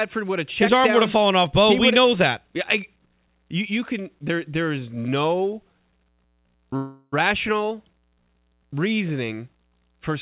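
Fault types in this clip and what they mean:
call audio freeze: from 6.76 to 7.14 s the sound stretches into a fading buzz, likely from delayed packets; unlike a dropout, nothing is lost, and the rest resumes late.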